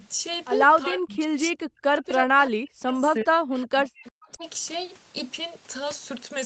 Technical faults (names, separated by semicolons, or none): speech suppressed in double talk